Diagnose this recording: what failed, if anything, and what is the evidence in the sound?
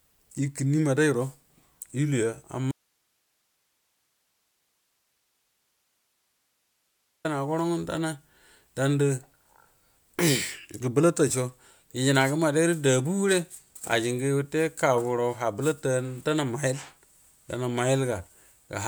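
Speech cuts abruptly to hiss about 50 dB down from 2.72 to 7.25 s. This is an audio dropout to a faint residue, likely a broken analogue input connection.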